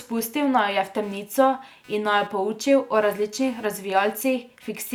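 Throughout the recording, a buzzing, chirping layer of computer activity noise sits roughly 30 dB below the speech, pulsing at around 300 per second. Shifting processor or peripheral load disturbs the shared ground of the audio circuit, so the interference follows machine activity rather than the talker.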